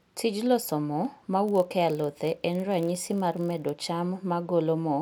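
From 1.46 s to 3.71 s, just after "loso mo", a block size mismatch (padded) occurs: one stage hands over blocks shorter than the next stage reads, and the shortfall in each block is filled with zeros. Every block therefore carries a brief silent gap, heard as a 43.1 Hz buzz over the speech, which fits 1024-sample reads at 44.1 kHz. Timing stays essentially unchanged at 0.999× speed.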